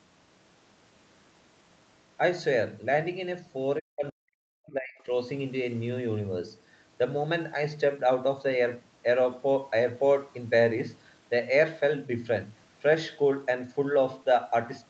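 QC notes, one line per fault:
3.79–5.11 s, speech suppressed in double talk: the speech level collapses in pieces across this span, falling by as much as about 40 dB at its deepest, with roughly a second of the span affected in total. The likely cause is the echo canceller treating the local talker as loudspeaker echo while the far end was also active, so its suppressor attenuated both. The remaining speech keeps the call path's normal 8 kHz upper limit.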